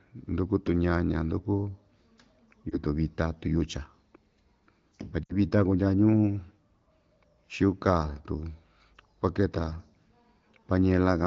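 Lost AMR speech frames at 2.70 to 2.82 s, just before "vita tiyucha", and at 5.24 to 5.36 s, before "vita kundya". Corrupted frames failed their check, so the wideband decoder held the last good settings with falling gain: first a brief warble suggesting one frame, then a longer fading stretch suggesting about three.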